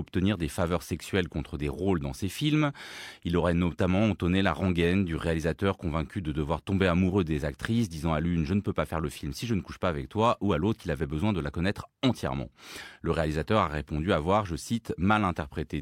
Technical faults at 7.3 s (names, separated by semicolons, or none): CD scratch ticks